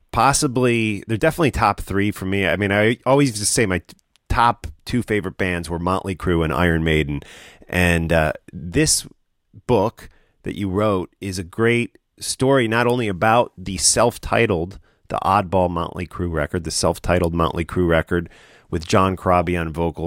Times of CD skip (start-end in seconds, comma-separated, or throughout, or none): none